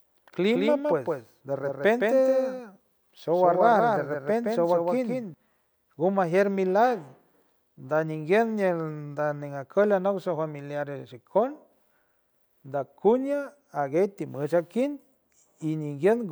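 From the very start of the speech until 5.34 s, a doubled audio track is present: a second full-band copy trails the original by roughly 150 ms, at about 5 dB lower, with no decay or room colour. It is likely caused by the signal being captured again through a slower path. On a spectrogram every syllable shows a fainter duplicate shifted right; the waveform shows echo-like repeats that vanish abruptly at 5.34 s.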